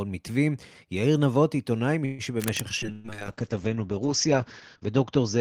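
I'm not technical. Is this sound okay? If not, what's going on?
No, several problems stand out. At 2.05 to 2.22 s there's a call audio freeze: the sound stalls and the last sound is stretched and fades out, filling about 0.13 s, likely because packets were held up in transit. Nothing is lost; the speech simply resumes late, from where it stopped.

From 2.39 to 2.62 s, cable scratch noise sits over the speech, an uneven rustling. It likely comes from a worn cable, plug or control being moved, making the electrical contact flicker rapidly.

From 2.82 s to the end, a call bitrate drop makes the speech rough and muffled. The connection's capacity fell, so the audio was squeezed much harder and the upper treble above 8 kHz was removed. It stays at its worst for about 1.4 s.

Inside that stretch, at 2.92 to 3.07 s, a burst of packet loss drops about 0.12 s of speech. The gap is covered by the last sound carried on and fading, then the speech picks up further along, with that part missing.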